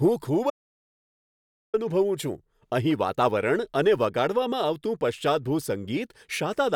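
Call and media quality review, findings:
Speech cuts out abruptly at 0.50 s and returns mid-flow at 1.74 s; gap is dead silence, no room tone, about 1.23 s of content lost. Audio dropout to silence, likely input loss upstream (device disconnect, link failure or mute) while the recorder kept writing silence.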